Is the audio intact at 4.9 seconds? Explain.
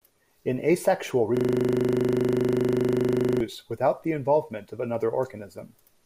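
Yes, at 4.9 seconds the speech runs on without any dropout, glitch or other fault.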